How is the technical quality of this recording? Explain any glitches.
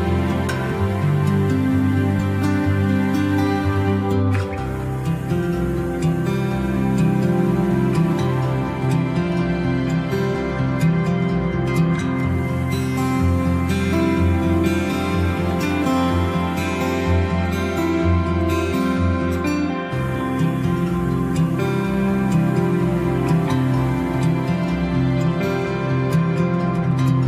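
The recording has four brief glitches, each a short chirp or blip lasting under a fiftieth of a second, at 2.18, 10.34, 23.48 and 25.64 s. Each is damaged data in a compressed stream. At those points some bytes of the encoded file were corrupted, so the decoder misread the frames, lost its place and skipped forward to the next valid frame header. That produces the squawk-like blip.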